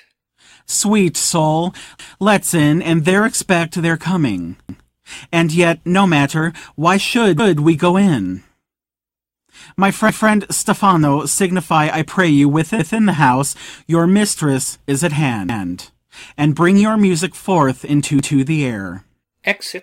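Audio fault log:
1.99–2.19, 4.69–4.89, 7.39–7.59, 10.09–10.29, 12.79–12.99, 15.49–15.69, 18.19–18.39 s, overlapping chunks: each 2.5 s chunk begins 200 ms before the previous one ended, so that slice plays twice at every join. The result is a regular stutter every 2.7 s, for example just before "we go in".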